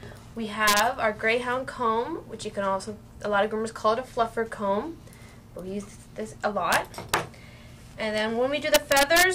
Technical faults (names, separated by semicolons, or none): integer overflow